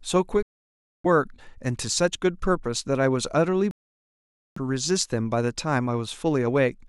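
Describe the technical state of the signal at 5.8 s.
At 5.8 s the speech signal is intact, with no audible fault at that moment.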